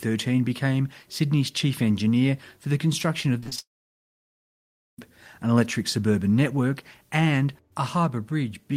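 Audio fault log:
3.40–3.59 s: repeated packet loss (robotic sound). Over this short span the stream breaks up five times, with the longest hole about 29 ms, so roughly 100 ms of speech never arrives. Each hole is bridged by stretching the sound that came just before it, and patched sound makes up 57% of the span. Because these patches repeat in quick succession, the speech turns choppy with small pieces missing.
3.59–4.99 s: long network dropout. Straight after the choppy stretch, the audio stops arriving for about 1.4 s. The receiver first carries the last sound forward as a short fading buzz or hiss, then gives up. For about 1.33 s there is only silence. Speech resumes near 4.99 s with no catch-up, so that whole section is simply gone. The cause is likely a stall in network delivery rather than anything in the recording itself.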